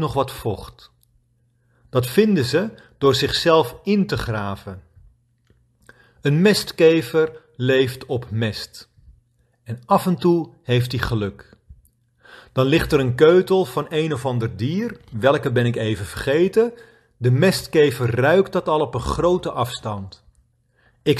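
Nothing in the speech stood out as a technical fault on listening.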